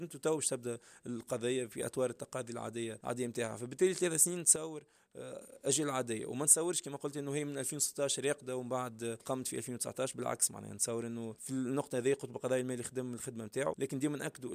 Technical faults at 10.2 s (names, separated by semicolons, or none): none